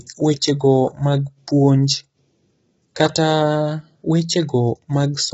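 From start to finish, the speech is rough and grainy. Low-delay AAC compression, likely AAC-ELD as used in video calls, is the cause. This codec works in very short frames, so it cannot separate the pitch harmonics cleanly. The damage here is heavy. Noise fills the gaps between harmonics, giving a hoarse, gritty edge. The sound fits a very low bitrate. Nothing is heard above 7.7 kHz, so the top band is missing and sounds dull.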